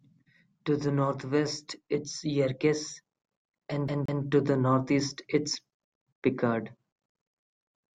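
This speech clip stutters briefly from 3.88 to 4.23 s: the same slice of audio, about 176 ms long, plays twice in quick, even succession, with a tiny mute at each jump. It is the CD stuck on one turn fault, where a scratch throws the laser back one track on each revolution.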